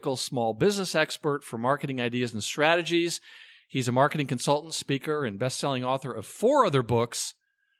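Nothing technically wrong can be heard in this recording of speech, as the signal holds steady throughout with no audible fault at any point.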